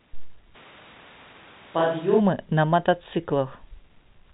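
From 0.56 to 2.19 s the speech turns hollow and roomy, about 5 dB quieter, likely a switch to a distant microphone: the waveform shrinks and the spectrogram shows thinner bass and a raised noise floor.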